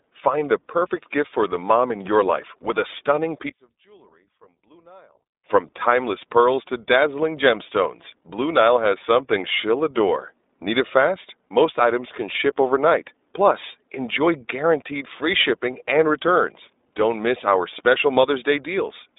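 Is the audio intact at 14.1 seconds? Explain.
No, at 14.1 seconds the speech carries iLBC codec damage, as it does throughout. Each 20 ms frame is coded independently, leaving a plainly rough, synthetic edge, and the character fits the 15.2 kbps mode. A spectrogram shows energy confined to about 250 Hz–3.7 kHz, empty above 3.8 kHz.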